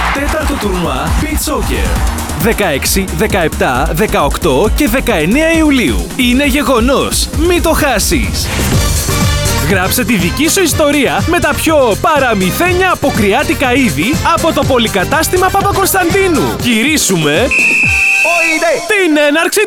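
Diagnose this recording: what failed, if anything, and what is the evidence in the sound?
No failure found; nothing in the recording points to one.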